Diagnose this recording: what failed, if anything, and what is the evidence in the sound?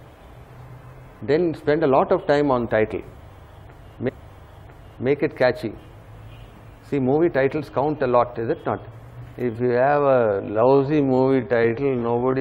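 Stream segment repeated at 4.08 to 5.07 s: at the playback stage, the same segment was queued twice, so about one second replays after a small blip at the jump back.

Time-stretched section from 9.41 s to the end: the pace abruptly slows to 0.61 times while pitch holds, likely from stretching software repeating short pieces.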